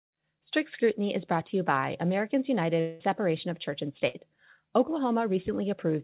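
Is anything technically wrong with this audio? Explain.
Yes, there are two gaps in the speech, carried over a narrowband call path whose spectrum stops at 4 kHz, which fits G.711 mu-law at 64 kbps.

From 2.8 to 3.02 s, about 0.2 s of speech is missing, likely from a long network dropout. The receiver fills almost the whole gap by continuing the last sound and letting it fade. On a spectrogram, the continued sound smears flat and dim. The waveform tapers but never reaches true silence, then speech resumes abruptly.

From 4.08 to 4.15 s, a burst of packet loss removes about 60 ms. The receiver fills it with a decaying repeat of the preceding sound. This shows as a short, flat, fading band on the spectrogram and a shrinking waveform just before the jump back in.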